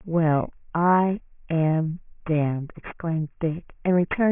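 Aliasing runs throughout the speech: the sample rate appears to have dropped, which fits a change from 24 kHz to 6 kHz without a filter first. Content above 3 kHz folds back down as unrelated tones roughly 20 dB under the speech, making sibilants gritty and metallic.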